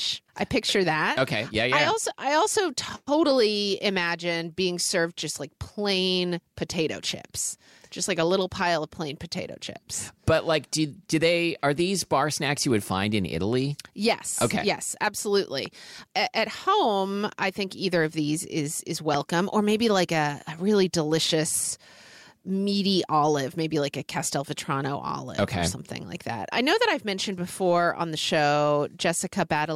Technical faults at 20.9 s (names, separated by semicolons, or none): none